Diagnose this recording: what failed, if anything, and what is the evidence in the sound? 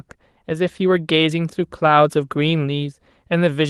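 The network stage dropped one packet in this Opus call, and the decoder filled the hole with a lost packet rebuilt from error correction: the low-bitrate copy carried in the following packet. There is no gap or click in the speech. Instead, a 20 ms stretch from 0.95 to 0.97 s sounds briefly coarser and grainier, which points to a single lost packet. That roughness sits against the normal coding texture of the call path, whose top end stops around 12 kHz.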